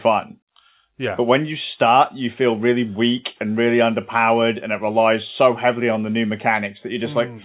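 No technical faults present.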